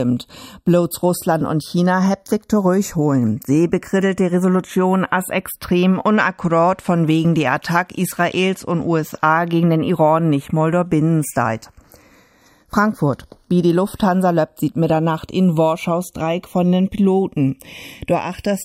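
The two channels are drifting apart across the whole clip, as if each came from a device on its own clock, off by a few tens of ppm. By the end the inter-channel delay creeps to under half a millisecond, so summed to mono the comb notches sweep and you get a slow flange.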